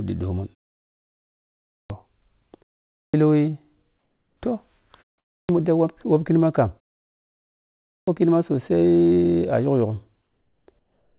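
Speech recorded through a narrowband call path with nothing above 4 kHz, which fits G.711 mu-law at 64 kbps, shows two faults. The output device drops into sleep during silence and needs time to wake, producing clipped starts after a pause at 1.69, 2.89, 5.28 and 7.86 s. About 0.21 to 0.25 s of each onset is swallowed, so speech bursts in abruptly, missing its opening sounds. Separately, the sender likely stops transmitting in pauses, leaving the receiver to fill them with comfort noise in place of the background from 3.98 to 4.37 s and from 10.79 to 11.18 s. The real background, about 50 dB below the loud parts, gives way to a smooth, featureless hiss, about 3 dB and about 1 dB quieter respectively.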